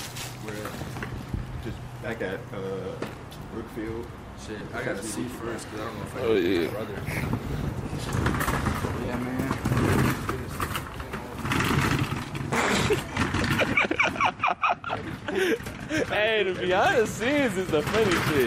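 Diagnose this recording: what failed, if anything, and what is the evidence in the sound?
Lost LE Audio frames on the Bluetooth link: LC3 concealment filled 4.59–4.61 s and 9.05–9.08 s with sign-scrambled repeats of the last spectrum, heard as brief noisy smears.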